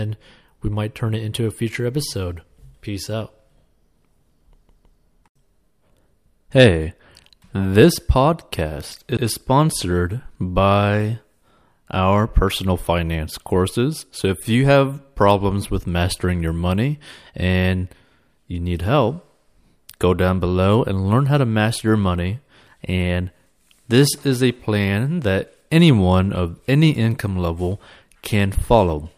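A speech clip with repeated frames in two places. At 4.69 to 5.01 s a 160 ms block plays twice more, adding 320 ms. At 9.17 to 9.26 s, just before "sponsored by", a 96 ms block plays once more. Both block lengths fit runs of compressed frames stored or sent again. What separates this from a dropout or skip is that nothing is lost: the same fragment recurs, and the audio grows longer.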